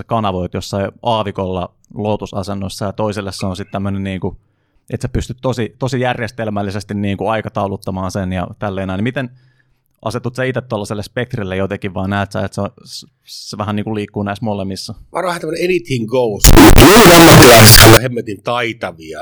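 From 16.44 s to 17.97 s, the speech turns into very loud, harsh distortion, and quiet stretches come out as loud as the rest. The likely cause is signed and unsigned mixed up: samples read with the wrong sign convention have their top bit flipped, so every zero crossing becomes a jump across the full range. The pattern fits 16-bit samples. Normal sound returns at 17.97 s.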